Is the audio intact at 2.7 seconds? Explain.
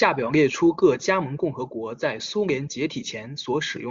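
Yes, the speech at 2.7 seconds is intact, with no audible fault at that moment.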